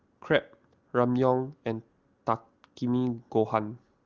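No technical faults are audible.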